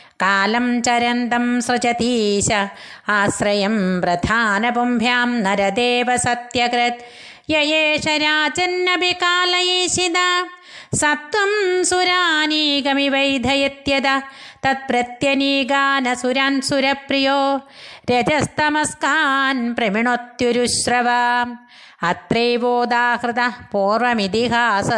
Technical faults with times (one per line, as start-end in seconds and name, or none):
none